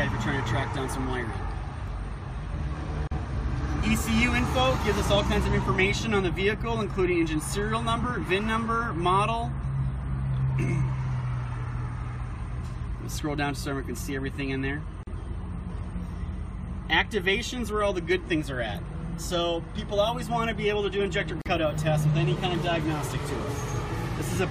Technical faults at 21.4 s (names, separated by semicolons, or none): gap at a join of encoded pieces